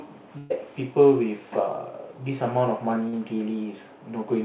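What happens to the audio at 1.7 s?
Nothing goes wrong at 1.7 s: the speech passes through intact, carried over the call path with its telephone-band limit, no content above about 4 kHz.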